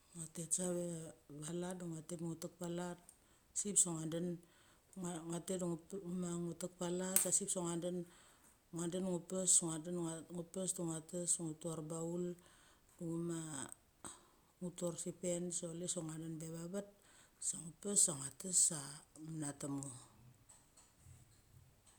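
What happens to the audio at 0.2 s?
Nothing goes wrong at 0.2 s; the speech carries on intact at that moment.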